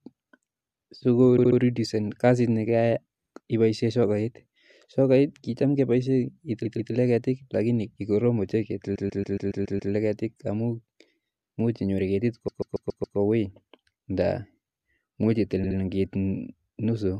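Repeated frames: blocks of compressed frames were played again, so the speech stutters, looping roughly 70 ms at 1.37 s and 15.63 s and about 140 ms at 6.64 s, 8.94 s and 12.47 s.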